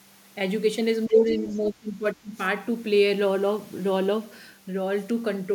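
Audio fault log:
1.07–2.39 s, speech suppressed in double talk: the talker dips by up to about 25 dB for roughly a second in total, likely an echo canceller ducking both overlapping voices.
1.09–1.15 s and 1.44–1.56 s, other side's voice leaking through: brief faint scraps of a second voice, roughly 20 to 25 dB under the talker, likely uncancelled loudspeaker echo.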